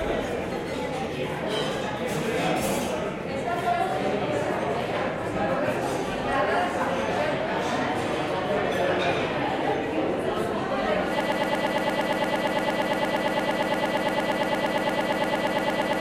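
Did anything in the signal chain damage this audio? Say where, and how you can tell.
Yes. A broken-record loop starts at 11.21 s and runs to the end: one 115 ms fragment repeats exactly, back to back, 42 times. A player, encoder or stream likely stalled and kept resending its last fragment, so the intended sound is lost.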